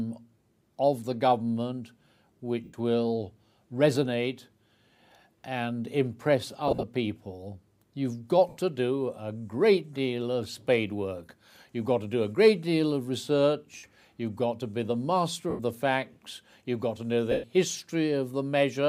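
Bluetooth LE Audio frames were lost six times, at 2.64, 6.68, 8.49, 13.77, 15.50 and 17.31 s, each gap roughly 70 to 120 ms. The LC3 decoder's concealment repeats the last spectrum with scrambled signs, so each dropout becomes a brief noisy smear. At 6.68 s the losses are scattered across 150 ms, with runs up to about 40 ms. The light lossy compression is hard to hear beneath these gaps.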